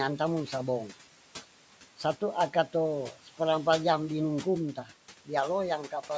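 Speech recorded through call microphone processing, with nothing above 8 kHz, and room noise about 20 dB below the voice. Throughout, noise suppressor artifacts appear: the suppressor pulls steady noise down by about 12 dB between phrases, letting it rise under speech.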